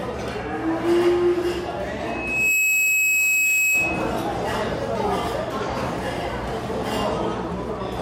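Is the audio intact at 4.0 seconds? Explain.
No. At 4.0 seconds the audio is inside a loudspeaker feedback squeal that runs from 2.06 to 4.18 s. A microphone is picking up the loudspeaker it drives, and at about 2.6 kHz the loop gain has climbed above unity, so that one frequency keeps reinforcing itself. It swells over roughly half a second into a steady, piercing tone that sits somewhat louder than the underlying sound and persists until it cuts off at 4.18 s.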